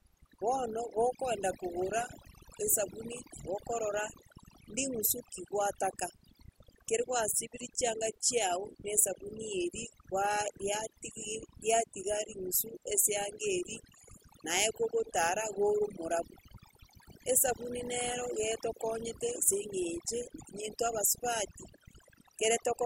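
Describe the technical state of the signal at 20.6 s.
At 20.6 s the speech carries overdone noise removal, present throughout. Bands near the noise floor are cut away. Background twinkles.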